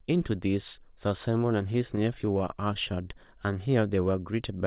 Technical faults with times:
1.73-2.92 repeated stalls (stutter)

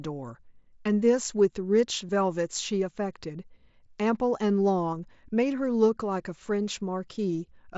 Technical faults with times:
2.08 concealed Bluetooth headset packet loss
4.92-4.99 concealed Bluetooth headset packet loss

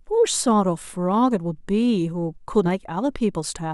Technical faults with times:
2.65-2.69 compressed frames skipped

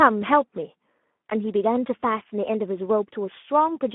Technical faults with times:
0.00-3.94 Speex codec

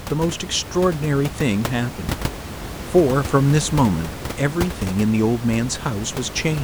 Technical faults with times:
none

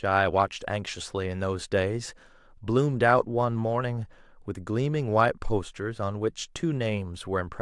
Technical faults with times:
none

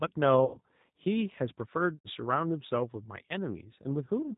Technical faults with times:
0.00-4.37 G.729 codec
0.45-0.59 VoIP packet loss concealed by the speech codec
1.96-2.09 VoIP packet loss concealed by the speech codec

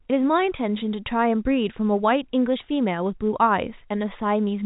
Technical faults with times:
none

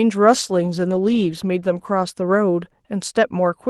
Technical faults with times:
0.34-3.03 call bitrate drop

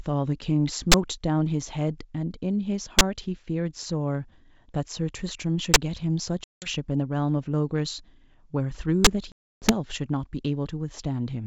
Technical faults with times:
0.92-0.94 invalid numbers at full scale
2.99-3.01 invalid numbers at full scale
5.74-5.76 invalid numbers at full scale
6.44-6.69 packet loss on an ADPCM call
9.05-9.07 invalid numbers at full scale
9.32-9.73 packet loss on an ADPCM call

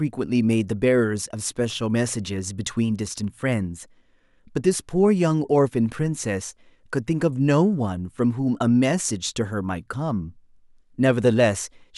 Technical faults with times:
none

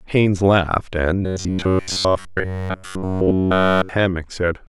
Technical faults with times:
1.23-3.89 robotic sound from repeated short buffers

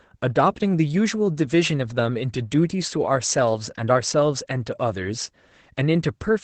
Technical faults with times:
0.00-6.44 Opus voice compression

